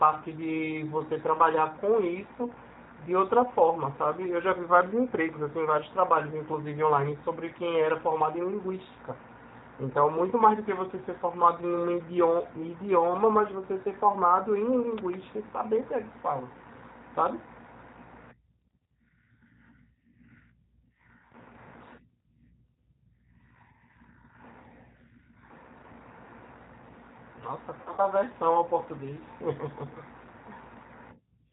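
Speech runs through a G.729 codec for the whole clip. Everything above 4 kHz is gone, and the voice sounds rough and synthetic, which fits 8 kbit/s coding. From 27.82 to 28.01 s there is VoIP packet loss concealed by the speech codec. About 120 ms of sound is missing, scattered over 160 ms in runs of up to 60 ms. The decoder fills the gaps by stretching the last sound into a fading buzzy tone or coloured noise, and the voice stays weak just after.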